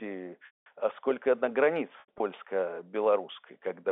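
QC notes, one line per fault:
0.46–0.66 s, packet loss with pitch repetition: a solid 200 ms chunk went missing, so the receiver loops the last pitch period, which fades into silence within about 50 ms before the audio cross-fades back in.
2.00–2.20 s, packet loss with pitch repetition: 120 ms lost in bits scattered across 200 ms, the longest run being 80 ms, so it comes across as brief buzzy held moments on the narrowband G.711 phone line rather than one clean dropout.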